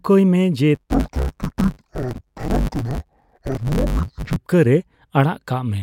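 From 0.75 s to 4.37 s, just after "ᱢᱮ ᱡᱮ", the audio is affected by interleaved audio read as planar. Each 10 ms block of alternating left and right samples is unpacked as if its first half were the left channel and its second half the right. Each half therefore plays at half speed while the overall pace of the speech holds. With blocks this short, the speech turns dull and robotic, with a buzz at the 100 Hz block rate and no clear drop of an octave.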